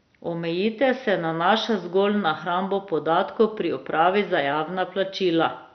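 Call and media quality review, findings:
Speech dull, gurgling and granular for the whole clip; nothing above 6.1 kHz. Likely MP2 compression: upper sub-bands switched off, remaining bands coarsely quantised and flickering, which fits heavy damage at about 48 kbps.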